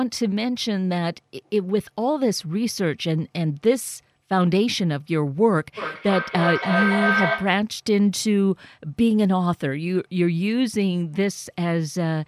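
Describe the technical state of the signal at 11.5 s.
Around 11.5 s the speech signal is intact, with no audible technical fault at that moment.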